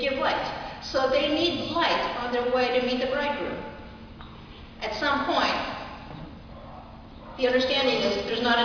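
Nothing here catches the ear as a technical problem; the audio just runs along steadily with no glitches to point at.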